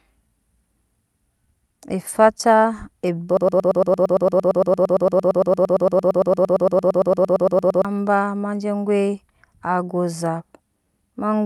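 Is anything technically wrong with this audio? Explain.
Yes, three timing faults are audible in this speech.

Throughout, small hiccups recur at uneven intervals. This is clock drift between sender and receiver: the sender's clock runs roughly 1.5% slow, so the receiver's jitter buffer keeps draining.

From 0.21 to 10.85 s, repeated timing corrections make the pace feel slightly dragging and unsteady, at about 98% speed. The receiver repeats short pieces to keep pace, adding roughly 200 ms overall.

From 3.37 to 7.85 s, a broken-record loop repeats a 114 ms fragment 39 times back to back, replacing the speech that belonged there. The likely cause is a player or stream stall that kept resending the last fragment it held.

The Opus call path limits the bandwidth to 12 kHz.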